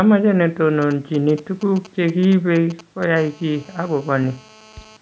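From 0.82 to 3.04 s, GSM signalling bursts break in. A nearby 2G phone sends short groups of radio bursts, and the audio circuit rectifies them. You hear a galloping dit-dit-dit of ticks and brief 217 Hz buzzes, roughly 20 dB under the speech.

From 3.16 to 4.97 s, a steady GSM phone buzz takes over. The phone is now transmitting continuously as in a call, pulsing 217 times a second. The rectified pulses give a hard, raspy 217 Hz buzz full of harmonics, about 28 dB below the speech.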